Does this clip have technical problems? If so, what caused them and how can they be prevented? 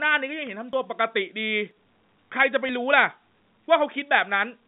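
Yes. Short skips at 0.73, 1.71 and 2.69 s, one second apart, each dropping roughly 20 ms of speech, are likely audio missing between chunks. Prevent this by buffering continuously across chunk boundaries.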